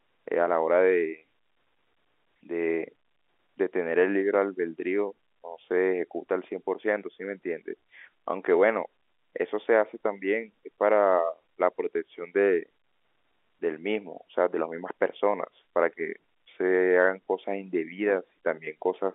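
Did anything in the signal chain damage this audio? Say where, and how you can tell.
No, nothing in the signal chain damaged this audio.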